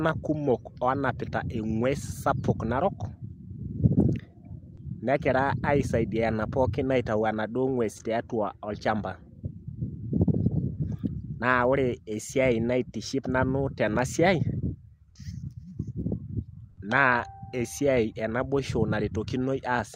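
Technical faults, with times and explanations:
16.69 to 16.77 s, comfort noise in place of the background: discontinuous transmission, likely Opus DTX, halted sending during a pause, so the receiver filled 80 ms with synthetic noise, about 3 dB quieter and featureless, replacing a real background sitting about 32 dB below the loud passages.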